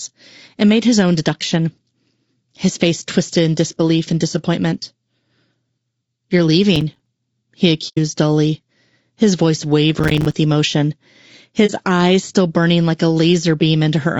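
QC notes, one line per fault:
throughout, low-delay AAC compression: the voice is plainly rough and grainy, with a hiss-like fill between the pitch harmonics and a thin, somewhat synthetic top band. The likely cause is AAC-ELD, the low-delay AAC used in video calls, at a rate that fits about 32 kbps. Its short frames resolve harmonics poorly, so the damage is spread through the voice. It is steady and never drops out, unlike the timed faults below.
6.76–7.06 s and 9.99–10.32 s, processor overload crackle: two bursts of gritty tearing ride on the speech, the second just after "dully his voice". Each burst is a chain of tiny hard-edged silent gaps: about seven in the first and about fifteen in the second. This fits missed deadlines on buffers of roughly 5 ms while the processor was overloaded. The sharp edges and rapid repetition make it crackle rather than a clean hole, and it stops once the load passes.
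7.88–7.98 s and 11.66–11.71 s, AAC frame loss with muting: the sound fades out and back in, leaving soft-edged holes of 90 ms just before "dully his voice" and 30 ms just before "eyes still burning like". These lengths fit three frames and one frame of about 30 ms, whose spectrum the decoder zeroed. The overlapping windows smooth the edges. That separates these holes from the crackle bursts.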